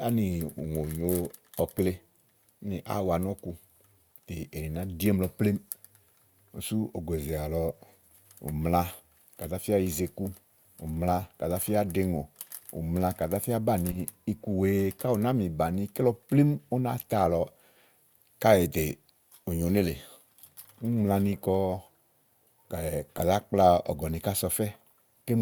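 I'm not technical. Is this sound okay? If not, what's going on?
No. Short blips at 13.91, 16.89 and 23.17 seconds are each a corrupt frame decoded: damaged chunks of compressed speech were played anyway, producing brief wrong-pitched noise.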